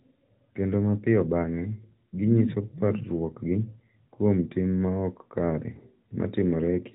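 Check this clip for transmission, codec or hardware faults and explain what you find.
No transmission, codec or hardware faults turn up in this clip.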